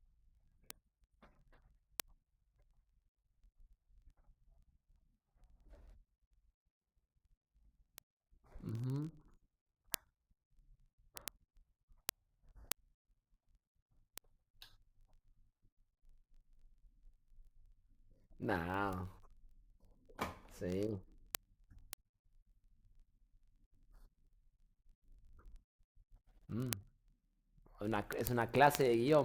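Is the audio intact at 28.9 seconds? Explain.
No. Word clock ticks run from 0.12 to 29.23 s. An unlocked receiver clock slips about every 0.02 s, dropping or repeating one sample, giving sharp, steady ticks.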